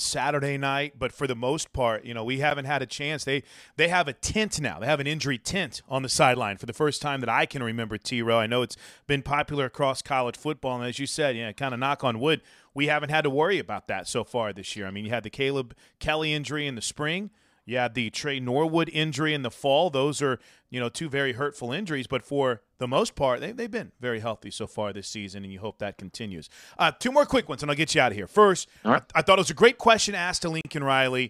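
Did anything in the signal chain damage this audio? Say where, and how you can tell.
Yes, two brief dropouts in this speech clip point to a Bluetooth stall at the wireless playback link. At 2.50 s, after "part you know we" and before "had a chance", the sound cuts to silence for about 10 ms. At 30.61 to 30.65 s, after "was a great question", it goes silent for 38 ms. Each gap is clean silence before the audio resumes, which fits a headphone buffer running dry, likely because radio interference delayed packets until retransmissions arrived.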